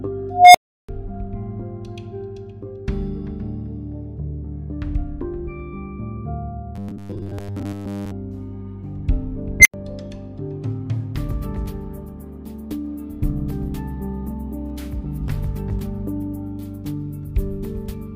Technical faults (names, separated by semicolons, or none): unstable filter; robotic sound from repeated short buffers